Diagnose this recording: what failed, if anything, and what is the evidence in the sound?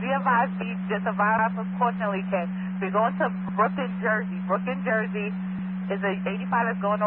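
Twice the sound stutters: a short stretch, about 100 ms long, plays a second time right at the join, heard at 1.39 to 1.49 s and again at 3.49 to 3.59 s, exactly 2.1 s apart. This is overlapping chunks at the buffer or block-processing stage. The audio was handled in blocks of 2.0 s, and each new block began 100 ms before the previous one ended, so that tail is replayed at every boundary.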